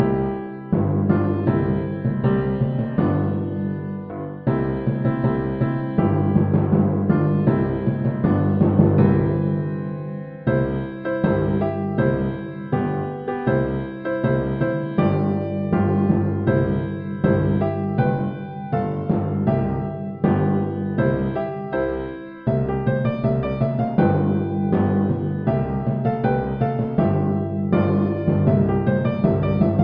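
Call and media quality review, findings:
No faults found.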